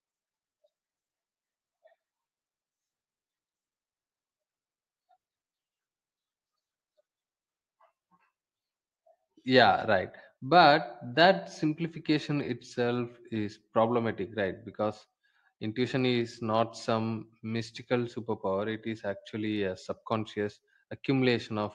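Speech that has gone through a WebRTC call path, carrying the call codec's normal coding noise and a top end that stops at 12 kHz, with no technical fault in the signal.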